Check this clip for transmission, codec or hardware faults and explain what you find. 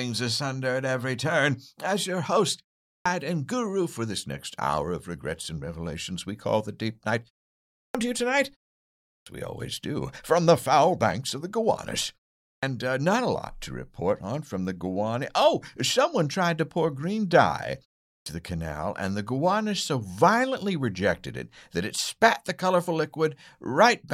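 One fault recurs: clipped start after a pause. It occurs at 2.87, 7.75, 9.1, 12.44 and 18.07 s. Each follows a pause of 0.3 to 0.62 s. The output device sleeps in the gap and needs time to wake. About 160 to 200 ms of speech is lost each time. Speech bursts out of silence without its first sounds, as before "to you tonight", before "uh not a lot", and between "to pour green dye" and "the canal and the".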